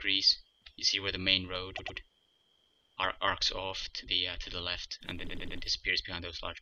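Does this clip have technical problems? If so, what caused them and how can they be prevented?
Yes. Repeated frames: a block of compressed audio was sent or written more than once, so the decoder replayed the same 104.5 ms stretch, which fits four frames. This causes a stutter with two extra plays from 1.77 to 1.97 s and three from 5.27 to 5.58 s. Prevent it by dropping duplicate frames by sequence number before decoding.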